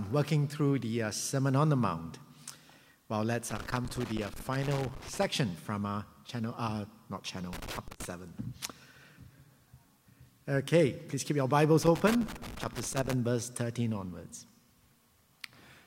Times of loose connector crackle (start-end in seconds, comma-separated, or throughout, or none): 3.50-5.25, 7.53-8.05, 11.83-13.14